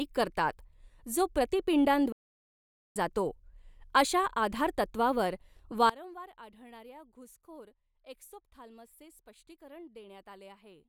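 It's a speech clip with two problems. At 2.12 s the audio just stops dead for about 0.83 s, picking up again at 2.96 s, which is likely a playback stall where the player briefly ran out of data. Then from 5.90 s to the end the level drops by about 22 dB and the speech goes faint, most likely one channel inverted, so the shared centre content cancels when the two channels sum to mono.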